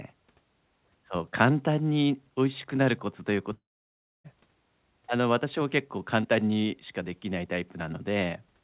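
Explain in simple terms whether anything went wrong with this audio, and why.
Between 3.53 and 4.27 s, audio likely stopped arriving for about three quarters of a second, a long network dropout. The receiver stretches the last sound into a fading buzz, then near-silence, and the speech resumes with that part missing.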